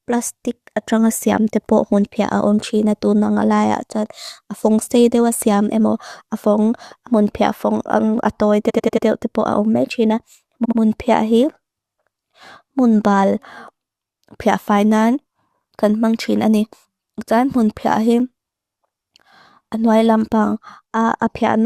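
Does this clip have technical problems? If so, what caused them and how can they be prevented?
Yes. Repeated frames cause stutters at 8.69–9.06 s after "pia fong ang atoy" (a 93 ms block replayed four times), 10.64–10.78 s before "pia him", and 18.58–18.72 s after "mun pia him". Writing each compressed frame exactly once prevents this.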